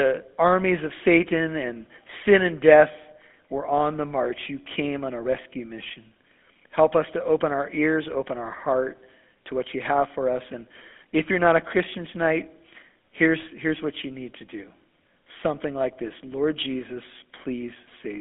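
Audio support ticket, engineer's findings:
GSM full-rate codec, throughout: buzzy, gravelly speech, band limited to 250 Hz–3.5 kHz; pulse-driven vocal-tract model with coarse excitation, fits 13 kbps full-rate coding.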